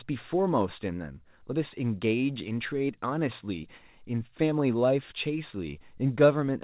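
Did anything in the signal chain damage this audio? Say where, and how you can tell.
No, the chain passed this speech without damage.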